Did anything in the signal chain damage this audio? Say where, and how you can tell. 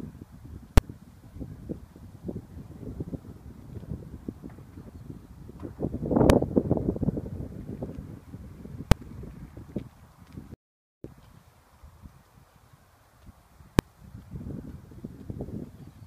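Yes. Invalid numbers at full scale appear at 0.78, 6.30, 8.92 and 13.79 s. Each is a single loud bang, 1.5 to 5.8 ms long, fitting blocks of 64 to 256 samples. A processing calculation produced infinite values. Conversion clamped them to maximum level.

An audio dropout to silence runs from 10.54 to 11.04 s, about half a second. The sound cuts off mid-flow and resumes abruptly. The gap is silent, with no room tone. The input was likely lost upstream while the recorder kept writing zeros.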